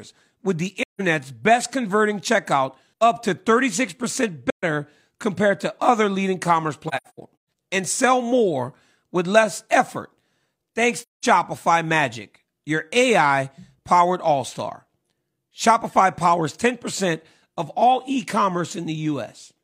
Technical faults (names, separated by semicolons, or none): AAC frame loss with muting